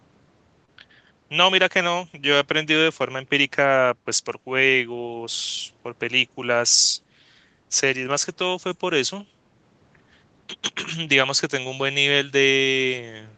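At about 0.65 to 0.69 s there is a short concealed packet loss: roughly 20 ms of speech arrived too late, and the decoder filled it by extending the preceding sound, so you hear a brief smear or wobble rather than the hard silence or click of a true dropout.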